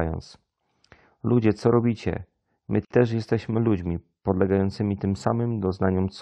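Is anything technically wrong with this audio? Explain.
Yes. From 2.85 to 2.90 s the speech cuts to a 55 ms gap with smeared edges. This is a gap at a join of encoded pieces, where untrimmed encoder delay and padding remain.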